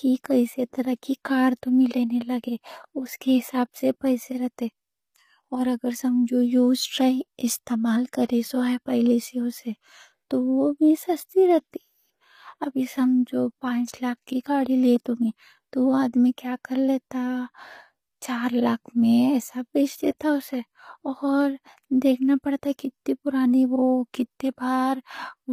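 Throughout the speech, the treble sounds synthetic, with nothing above 15.5 kHz. S sounds come out gritty and lispy. This is likely HE-AAC compression: only the lower spectrum is coded, and higher bands are rebuilt from copies. The damage fits a low bitrate near 24 kbps.

At 20.19 s, a brief hiss arrives just before a sharp attack. This is pre-echo. The codec spread quantisation noise across its whole block, so noise meant for the loud onset leaked about 19 ms ahead. The attack sounds softened.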